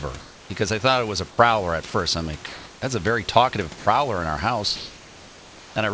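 From 0.20 to 0.50 s, just before "I thought it was", the sender likely switched to discontinuous transmission during the pause, and the receiver generated comfort noise in place of the background. For those 300 ms the real room noise, which sits about 23 dB under the speech, becomes a smooth, featureless hiss about 2 dB quieter, before the sound returns.

Three short cuts follow where the voice detector likely misjudged sound as background and stopped sending. These are sound dropped by the voice detector. At 1.30 to 1.38 s, 80 ms is filled with synthetic noise, and about 60 ms of real sound vanishes. At 1.90 to 1.94 s, 40 ms is lost. At 3.78 to 3.86 s, between "that's a very talkative" and "in our", an 80 ms gap swallows about 40 ms. Each time the sound briefly gives way to steady noise before it returns.

From 4.76 to 5.76 s, after "in our", transmission likely paused again. A full second of comfort noise in place of the background follows, about 1 dB louder than the real room noise and lacking its texture. 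Like the rest of the clip, it stays within the G.722 call band, with nothing above 8 kHz.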